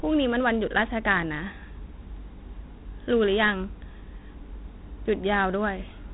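From start to finish the speech carries Dialogic VOX ADPCM damage, the telephone-grade 4-bit adaptive coding whose plainly audible grit fits a 32 kbps stream. Each sample is stored as a small step from a prediction, so errors ride along with the signal as a rough hiss that swells with the speech. On a spectrogram everything stops at about 3.9 kHz, leaving a flat empty band above, while the waveform shows grainy noise hugging each syllable.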